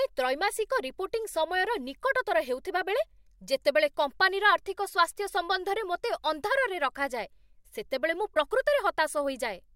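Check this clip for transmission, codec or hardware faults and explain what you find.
One fault is present, near the end of this speech clip. From 8.32 to 8.37 s there is damaged data in a compressed stream. For about 50 ms, the bytes reaching the decoder were wrong. It could not read those frames correctly. It lost sync and had to search for the next valid frame header. The result is a short chirp, squawk, click or hole in the sound. It is brief.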